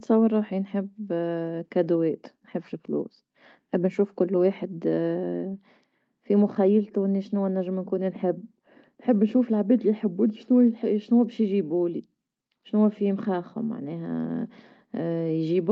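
Nothing in the speech stood out as a problem on listening, with the audio coming across as expected for a call carried over a WebRTC connection.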